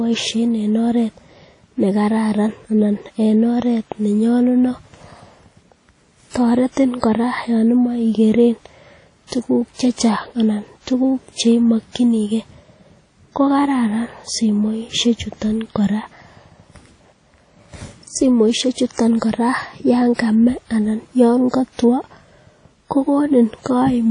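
Throughout the speech, ringing, washy hiss that swells with the signal and nothing above 10.1 kHz point to a low-bitrate transform codec, likely WMA compression, rather than broadband noise, which would not breathe. From 9.27 to 9.32 s, just before "tuguk che", pre-echo: about 49 ms of hiss leads the attack, smeared ahead of it by the long block, unlike a click, which would be instantaneous.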